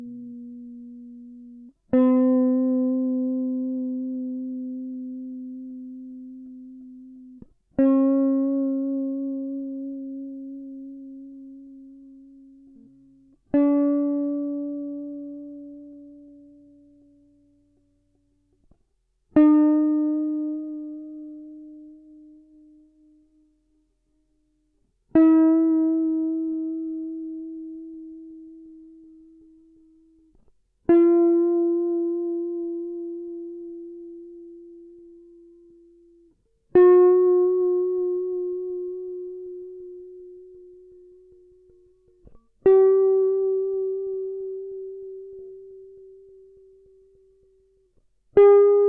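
Throughout the music, a wrong sample rate slows everything to 0.69 times speed and drops pitch 6.45 semitones together, which fits 32 kHz material played at 22 kHz, unlike a pitch shift that keeps tempo.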